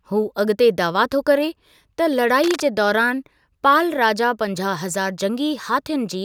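From 2.43 to 2.61 s, just before "जे दौरान पाल राजा", cable scratch noise adds dense, uneven rustling roughly 10 dB below the speech, likely a worn connector being moved.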